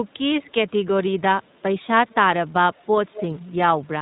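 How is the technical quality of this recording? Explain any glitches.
The technical quality is compromised by plainly audible narrowband coding throughout and by three brief delayed repeats of the speech.

Across the whole clip the speech passes through the iLBC codec, and the damage is plainly audible. Nothing above 4 kHz survives. Each 20 ms frame is coded independently, which fits iLBC's 15.2 kbps mode. The result is a rough, slightly synthetic texture. It sounds like consistent coarseness rather than the warbly, bubbling artefacts of a low-bitrate transform codec.

At 0.44 to 0.5 s, 2.09 to 2.15 s and 3.13 to 3.25 s, a delayed copy of the speech appears. It lags by 161 ms at the first point and 193 ms at the other two. The first two copies are very faint, and the third is clearer, though still well below the direct speech. This is likely an echo leak, where a loudspeaker on the far end fed back into a microphone and its echo canceller missed part of it. 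A room reflection would sound different, because it smears the sound continuously. These are short, separated repeats at set lags.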